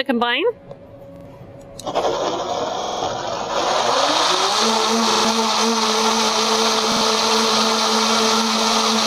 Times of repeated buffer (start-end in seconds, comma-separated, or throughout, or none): 1.16-1.25, 2.83-3.02, 5.11-5.25, 6.92-7.01